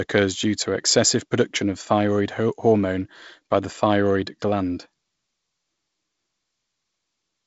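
Nothing goes wrong in this speech clip; it's simply G.722 wideband telephone coding doing its job, with content reaching up to roughly 7.7 kHz and nothing above, a faint hiss in the top band, and a touch of extra grain lower down that fits the 48 kbit/s mode.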